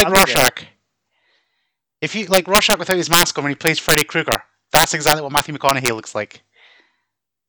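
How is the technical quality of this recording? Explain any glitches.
The recording has a serious fault in four stretches of the speech. Integer overflow occurs at 0.00 to 0.48 s, 2.34 to 3.23 s (just before "on when he"), 3.67 to 4.35 s (just after it), and 4.75 to 5.88 s (before "looks like"). The level was pushed about 6 dB past the integer limit. Peaks wrapped to the opposite sign instead of being held. Loud moments crack violently, harsher than clipping.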